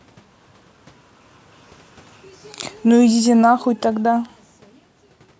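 From 2.87 s to 5.35 s the automatic gain control, having judged the input too loud or its background noise too strong, steadily pulls its gain down by about 7 dB. The speech therefore sinks gradually over those two and a half seconds, and the room noise behind it drops by the same amount, so the whole sound recedes together rather than just the talker. That shared fall is what separates it from the talker's own change of distance from the microphone around 4.5 s.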